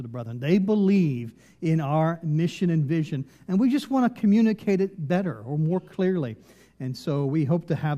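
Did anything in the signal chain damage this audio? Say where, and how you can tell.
No, nothing stood out on listening that would point to damage at any stage of the chain.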